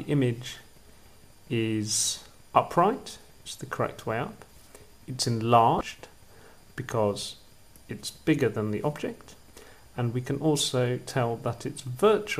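Damaged data in a compressed stream appears from 5.78 to 5.81 s: for about 33 ms the decoder meets corrupted or missing bytes, cannot read the frames there, loses sync and hunts for the next valid frame header, leaving a brief glitch in the sound.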